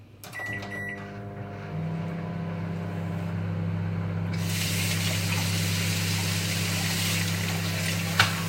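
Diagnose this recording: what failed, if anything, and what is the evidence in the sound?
Nothing stood out on listening; no stage of the chain shows a failure that can be heard in this recording.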